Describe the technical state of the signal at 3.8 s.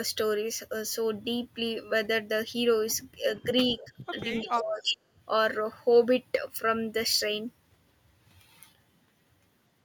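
Right around 3.8 s you've got an echo leak running from 3.69 to 3.89 s. A faint copy of the speech comes back about a third of a second late (334 ms), sitting roughly 20 dB under the direct sound, so it reads as a ghost trailing the talker. The likely cause is a far end on loudspeaker whose echo canceller didn't scrub everything its mic picked up, so the leftover got sent back down the line.

Overlapping that, from 3.84 to 3.92 s, there's speech suppressed in double talk. The talker's level dips by up to around 10 dB, and the affected stretch adds up to about 70 ms, so you hear a brief ducked patch right where the echo is present. What's happening, likely, is that the canceller saw both signals at once, couldn't tell the real talker from the returning echo, and pulled both down together.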